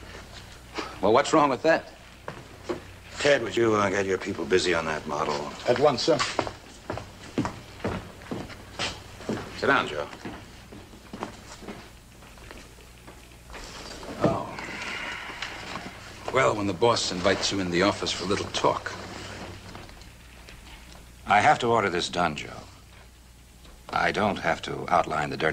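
At 3.57 s and 5.11 s the audio jumps abruptly, with no gap. These sound like dropped buffers (overrun), likely losing roughly 30 ms and 10 ms.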